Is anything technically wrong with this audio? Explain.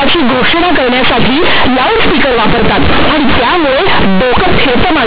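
Yes. Throughout, the speech has companded audio read as linear: mu-law bytes from the 8 kHz telephone path are being played as plain 8-bit samples, never expanded. Quiet passages blow up to be as large as loud ones, so it's harsh, buzzy and very loud, with heavy noise filling the pauses.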